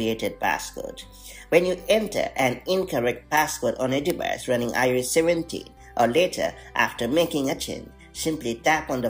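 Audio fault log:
1.09 to 8.64 s, word clock ticks: about seven sharp ticks, roughly one every second and a half. The receiver runs on its own clock, not locked to the sender's, drifting by something like 15 ppm, so each slip drops or repeats a single sample.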